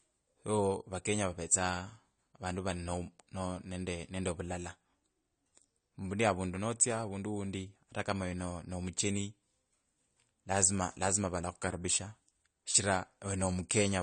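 From start to finish the speech sounds dull and smeared, with plainly audible coding damage and nothing above 9.1 kHz. Likely AAC compression is the cause: an AAC-LC encoder at a low bitrate, fitting roughly 32 kbps, cut off the top band and quantised the rest coarsely.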